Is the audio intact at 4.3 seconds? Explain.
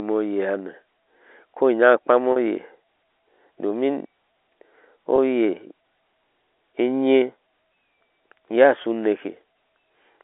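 Yes, at 4.3 seconds the speech is intact, with no dropout, click or distortion, only the narrow telephone band of G.711 coding, which keeps roughly 300 Hz to 3.6 kHz.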